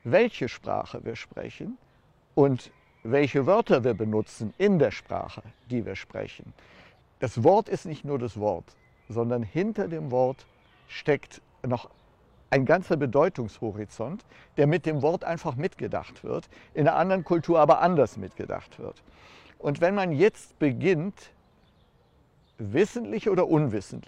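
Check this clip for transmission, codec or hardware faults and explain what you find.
No technical fault can be heard anywhere in this signal, which stays steady and intact with nothing from its transmission or equipment chain leaving an audible mark.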